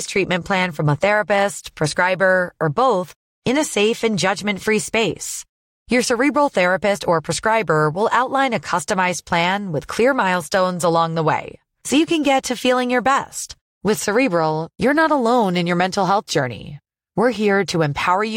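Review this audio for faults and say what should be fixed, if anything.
No faults found; nothing needs fixing.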